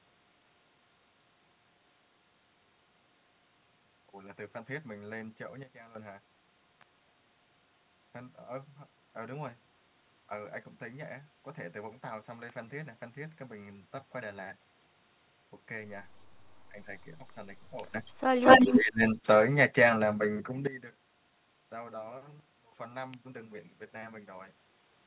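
Sudden gain jumps in this speech recording hit at 5.63–5.95 s (down about 13 dB), 17.94–20.67 s (up about 17 dB) and 22.40–22.72 s (down about 22 dB). Voice and background step together, most likely from a gain change applied instantly, without a ramp. Electrical switching spikes at 6.81 s, 12.50 s and 23.14 s are sharp, isolated snaps laid over the sound, likely arcs from a nearby switch or static discharge coupling into the line. Speech suppressed in double talk appears at 16.70–16.89 s, 17.18–17.47 s, 18.61–19.03 s and 19.22–19.26 s. The voice dips by roughly 5 to 20 dB in brief pieces, deepest around 18.6–19.0 s, likely because the echo canceller turned down both sides while they overlapped. Echo leak brings back a delayed copy of the voice at 18.05–18.11 s, about 280 ms late and faint, around 30 dB below the speech. It returns at 18.33–18.76 s, about 231 ms late and roughly 10 dB louder than the speech, likely from a loudspeaker's echo slipping past the far end's canceller. 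The narrowband call path, with nothing above 4 kHz, fits G.711 A-law at 64 kbps.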